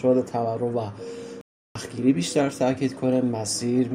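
At 1.41 s the audio cuts to silence mid-flow and stays silent until 1.75 s, about 0.34 s, before the sound carries on. This is a playback stall, likely the player running short of data or its thread being held up.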